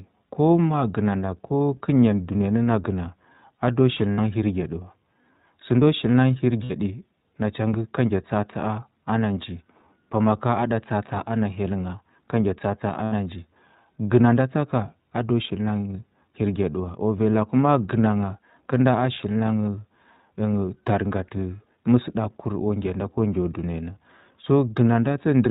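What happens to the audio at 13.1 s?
At 13.04 to 13.14 s there is a short run of lost iLBC frames. For about 80 ms the sound turns into a held, faintly buzzy, breathy vowel. The decoder has no data, so it keeps repeating the last pitch cycle blended with noise. The span points to four missing 20 ms frames. This differs from a plain dropout, which would leave silence or a click. It also differs from a predictive codec's loss, where the damage smears on for several frames afterward. Here the sound snaps back to normal almost immediately, because each iLBC frame is coded independently.

Underneath that moment the whole clip passes through the iLBC codec at a bitrate that fits 15.2 kbps in 20 ms frames. It is plainly audible. Everything above 4 kHz is gone, giving a narrowband telephone quality, and the speech has a slightly rough, synthetic edge from the way each frame's excitation is modelled. 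Unlike the loss concealment, this coloring is constant rather than confined to one instant, with no buzz or held vowel.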